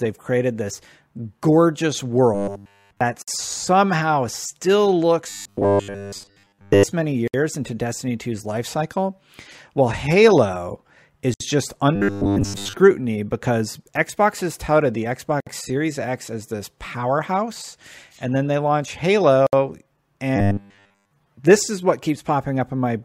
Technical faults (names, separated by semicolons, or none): robotic sound from repeated short buffers; gap at a join of encoded pieces